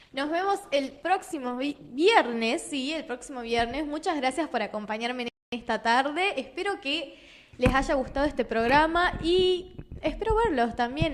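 For the first 2 seconds the audio sounds dull and smeary, with the top end thin or synthetic and codec artefacts stronger, then it snaps to better quality with no gap. That's an adaptive stream starting at a low bitrate; it fits a player opening on something like a 16 kbit/s Opus rendition to start fast, then stepping up to around 64 kbit/s once it had gauged the connection. At 5.28 s the sound simply cuts out mid-flow for 240 ms and picks up again at 5.52 s. That's a playback stall, likely the player running dry on buffered data or having its audio thread blocked until it recovered.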